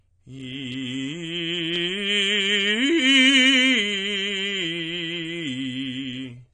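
From start to finish the music is dull, with nothing above 9.7 kHz, and sustained tones warble with a fizzy smear. That points to AAC compression, likely AAC-LC at a low rate near 32 kbps. A plain low-pass filter would dull without that swirling, holey texture.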